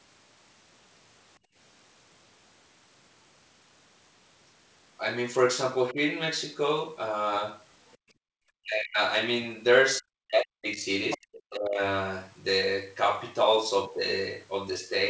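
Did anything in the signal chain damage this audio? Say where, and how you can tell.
Yes. The call processing stage did it, through the echo canceller. The background is gated by the echo canceller at 1.39 to 1.56 s (down about 22 dB) and 7.97 to 8.33 s (down about 39 dB). The room tone ducks while the far end plays, then recovers when the canceller releases.

The talker's voice is suppressed, most likely by double talk. There's a shallow dip at 5.93 to 5.97 s, then deep cuts of around 40 dB at 8.61 to 8.99 s, 10.0 to 10.88 s and 11.16 to 11.82 s. The canceller couldn't separate near speech from loudspeaker echo, so it pulled everything down.

The other side's voice leaks through at 11.1 to 11.18 s, roughly 10 dB under the talker, and again at 11.34 to 11.51 s, much fainter. This is likely residual echo the canceller missed while it was busy clamping, heard over a G.722 path that has nothing above 8 kHz.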